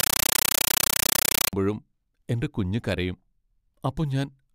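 From 0 to 1.53 s there's compressed stream played as audio: a Dolby Digital (AC-3) stream went out as raw samples without being decoded, so you get harsh, loud chattering static, 9.3 ms noise bursts then silence, 31.25 times a second, before the speech comes through.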